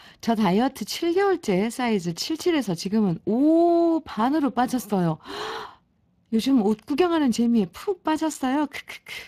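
The speech has passed through the Speex codec from start to finish. Its CELP coder has too few bits to model the excitation, which fits a rate around 22 kbps, so the voice carries a plainly audible hoarse, noisy grain, and nothing remains above 15.4 kHz.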